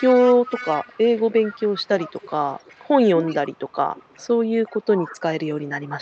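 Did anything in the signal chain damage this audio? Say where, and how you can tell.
Yes. At the call-processing stage there is an echo leak. A delayed copy of the speech trails it by 371 ms, about 15 dB down at 0.0–2.89 s, about 25 dB down at 3.27–4.28 s and 4.65–4.87 s, and about 35 dB down from 5.18 s to the end. The likely cause is a loudspeaker-side echo canceller passing residual pickup back.

The same stage also produces speech suppressed in double talk. The speech dips at 1.74–2.13 s (by about 25 dB), 3.35–3.52 s and 4.94–5.13 s (both by about 20 dB), losing roughly 200, 150 and 200 ms respectively. The first two dips fall while the echo is present. The likely cause is the canceller failing to separate talker from echo and attenuating both.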